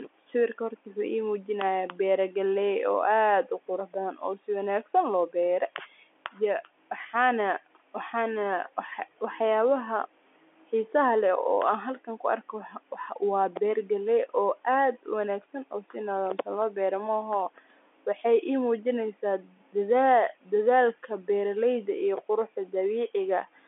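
Telephone-band speech with no technical faults.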